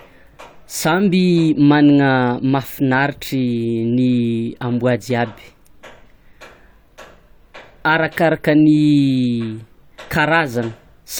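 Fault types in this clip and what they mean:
Nothing here to flag: listening along, no technical fault turns up anywhere in the recording.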